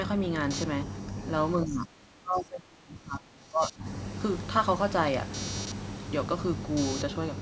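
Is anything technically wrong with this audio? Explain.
Yes, there are two problems.

From about 0.5 s right through to the end there's computer activity noise: a buzzy, chirping layer pulsing at around 300 Hz and sitting roughly 15 dB under the speech. Load swings in the processor, graphics card or mouse are shaking the ground that the audio circuit shares with the computer, so the junk follows what the machine is doing rather than the voice. That's why it keeps going in the pauses.

Between 1.65 and 3.85 s the voice sinks, at its deepest by something like 25 dB, and breaks up for around two seconds in total. The likely cause is speech suppressed in double talk. With both ends talking at once, the echo canceller couldn't separate this talker from the loudspeaker echo, so it pulled everything down together. What you hear is the voice thinning and dropping out in chunks, all inside the call's microphone path, which tops out at 8 kHz.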